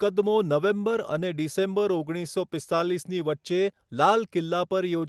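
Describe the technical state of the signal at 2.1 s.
At 2.1 s the signal is affected by clock drift between sender and receiver, present across the whole clip. The sender's clock runs roughly 4% slow relative to the receiver, so the jitter buffer keeps draining and must be topped up to avoid running empty. The drift is not heard as a single event. It sets a steady pressure that forces the receiver to keep adjusting, and that adjustment is what can be heard.

The moment also falls inside a run of repeated timing corrections spanning 0.06 to 5.02 s. To compensate for the slow sender, the receiver repeatedly duplicates short fragments of audio, stretching playback to about 95% speed and adding roughly 200 ms over the stretch. The corrections all lengthen the audio but are unevenly spaced. The underlying call path sounds consistent with a 24 kbps Opus stream, band-limited to about 12 kHz.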